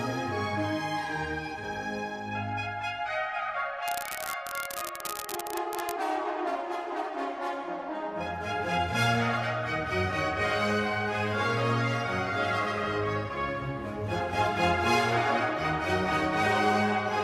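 An unreliable data bit runs from 3.87 s to 5.96 s. One line carrying a single bit of each sample is marginal, so that bit flips in a random share of samples, and every flip adds or removes the same fixed step, about -9 dBFS. The result is an even crackle or fizz laid over the sound for those two seconds, and it stays present in the quiet moments as well.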